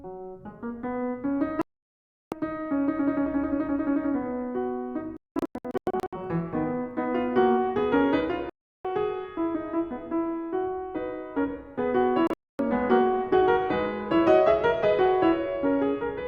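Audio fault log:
1.62–2.33 s, digital broadcast dropout: the music mutes for about 0.7 s and comes back further along, with that stretch simply gone.
5.17–6.13 s, digital broadcast dropout: several short holes spread over about 1 s, the longest 0.19 s.
8.50–8.85 s, digital broadcast dropout: a single cut of about 0.35 s.
12.27–12.60 s, digital broadcast dropout: a 0.26 s hole plus a brief extra blip. In each case the receiver lost frames and muted until clean ones returned.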